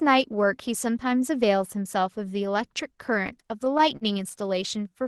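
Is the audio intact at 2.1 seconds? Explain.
Yes, the speech at 2.10 s comes through intact, with no dropout, glitch or other fault at that moment.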